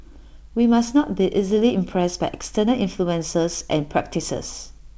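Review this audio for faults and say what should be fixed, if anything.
Nothing needs to be fixed, as no faults turn up in this audio.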